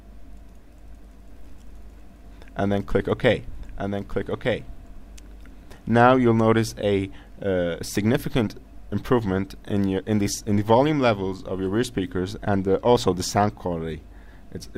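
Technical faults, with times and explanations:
1.29 to 6.77 s, doubled audio track: a second full-band copy of the sound runs about a second behind the original, roughly 5 dB quieter. It adds no decay or room colouring, so it reads as a clean, displaced repeat, not an echo, and it appears and vanishes abruptly at both ends. The likely cause is the same signal reaching the mix twice, once through a slower capture path, with the two copies out of step.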